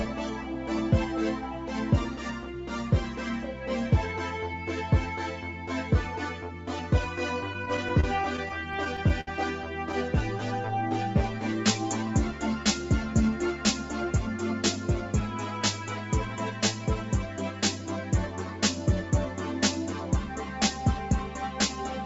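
Between 7.53 and 9.28 s the audio shows repeated stalls (stutter): the jitter buffer ran dry over a dozen times, and each wait was bridged by stretching the last sound, the longest about 64 ms, roughly 0.2 s in total. Nothing is lost, but the passage drags and hiccups. On a spectrogram these appear as short smeared, repeated columns, and the waveform shows brief flattened or fading stretches. The whole clip is band-limited to 8 kHz by the call path.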